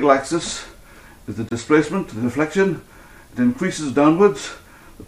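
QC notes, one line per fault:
1.49–1.52 s, Bluetooth dropout: likely one late packet dropped on the wireless link, leaving a 23 ms silent hole, which fits a single lost frame. Sound then resumes already moved on.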